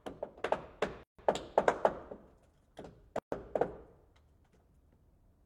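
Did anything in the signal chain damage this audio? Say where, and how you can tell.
Yes: at the codec stage, a gap at a join of encoded pieces at 1.03–1.19 s and 3.19–3.32 s, spaced 2 s apart. Untrimmed encoder delay and padding insert silence; unlike a dropout, nothing is lost.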